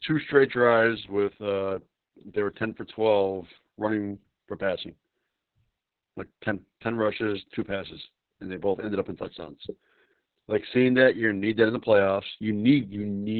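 From start to finish the speech carries heavy Opus voice compression damage. Everything above about 4.4 kHz is gone, so the coder has dropped to narrowband SILK mode and left it dull and boxed-in. The excitation is coded very coarsely, which gives the voice that hoarse, slightly robotic grain. That much damage fits a very low bitrate, around 6 kbps, probably with long 60 ms frames.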